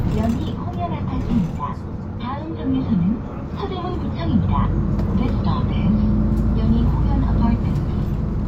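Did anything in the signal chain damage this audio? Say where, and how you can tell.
No, nothing in this recording of sounds stood out as damage from any stage of the signal chain on listening.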